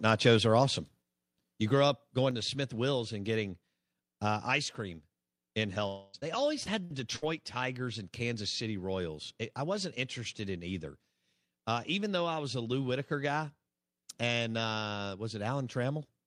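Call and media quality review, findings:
Microphone volume stepped down, twice. Call software likely reduced device input gain in single steps after judging the level too hot. At 1.02 s, after "are awesome": speech and background drop together by about 5 dB. At 2.31 s, after "grow up": a further drop of about 4 dB. Each is an instant level shift with no fade, and the reduced level persists afterward.

Long network dropout, 5.87 to 6.16 s, after "uh ice cream in". Likely a network stall where no audio reached the receiver for roughly a quarter second. The jitter buffer stretched the last sound across 260 ms as a fading buzz. The original 260 ms was never played, so the content there is gone, not delayed.

Repeated packet loss (robotic sound), 6.13 to 7.24 s, overlapping the dropout's tail. Four separate holes, longest 58 ms, each bridged by continuing the previous sound. Across the stretch about 14% is concealed, roughly a tenth of a second rebuilt. 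The result is choppy speech with fragments missing.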